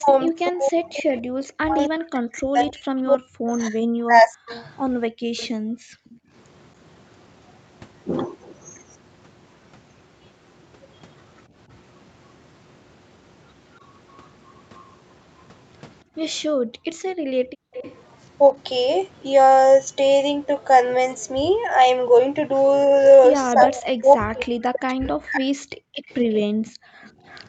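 From 0 to 4.51 s the speech is pulled down by about 40 dB in pieces totalling about 3 s, likely speech suppressed in double talk. The talker's own voice ducks, rather than room sound, while the far side talks.

From 4.5 to 6.15 s a faint delayed copy, about 25 dB below the speech and trailing by 280 ms, is likely echo leak. Unlike reverb, it is a distinct repeat at a fixed lag.

From 5.10 to 6.32 s the background dips by 40 dB, background gated by the echo canceller. Only the room noise drops out, for about 1 s in total, then returns.

The same gating recurs from 16.04 to 17.73 s. It is followed from 17.73 to 17.96 s by a brief echo leak scrap, likely from the same cause, about 20 dB down at 286 ms delay.

From 23.54 to 25.59 s the speech again ducks by about 40 dB over roughly 2 s, likely speech suppressed in double talk.

Background gating returns from 25.87 to 27.23 s. It overlaps an echo leak from 26.08 to 27.43 s, likely the same kind, about 30 dB down at 290 ms. 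Throughout, the band stops at 8 kHz from the call path.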